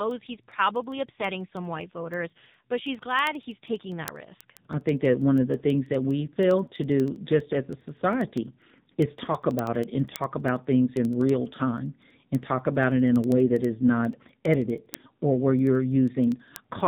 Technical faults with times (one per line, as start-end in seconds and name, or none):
0.00-16.87 AMR narrowband mobile codec
0.11-16.80 word clock ticks